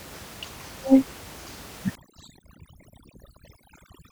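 From 1.95 s to the end of the clip, overdone noise removal sets in. The reduction is too aggressive, so bands near the noise estimate are pulled down hard, taking quiet voice detail with them. The room noise, about 14 dB below the speech, drops and breaks up into twinkling specks.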